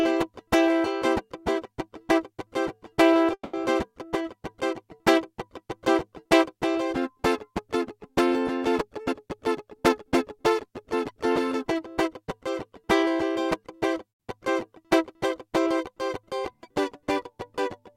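At 3.33 to 3.55 s, a call audio freeze, likely from delayed packets draining the jitter buffer, fills 200 ms: the music smears into a fading buzz, silent for its last 60 ms, then resumes where it stopped. From 9.04 to 10.03 s, a jitter buffer speed-up trims about a fifth of a second of excess buffered audio, so the music runs at 120% speed with unchanged pitch and its tempo hurries. At 14.10 to 14.27 s, a second call audio freeze, likely the same packet hold-up, inserts 150 ms of silence before the music continues with nothing lost.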